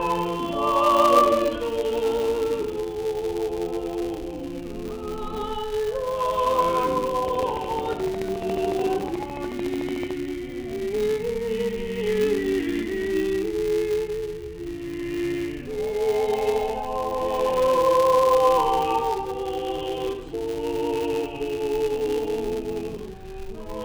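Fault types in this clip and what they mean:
Filter restarted on every block: A steady buzz at 200 Hz runs under the whole clip and grows and shrinks with the level of the sound. Each buzz cycle is a small transient at the start of a processing block, so the block rate is 200 per second. A filter is dropping its stored state at every block boundary and starting again from zero, so each new block opens with a brief jolt instead of continuing smoothly.
Train of clicks: From 7.28 to 10.12 s a run of sharp ticks sits on top of the sound, about forty in all, evenly spaced at 13.8 per second. They share much the same shape and peak roughly 10 dB above the surrounding signal, so they stand out clearly and do not depend on what the sound is doing. A regular pulse like this is likely interference from nearby equipment or a faulty connection or power supply.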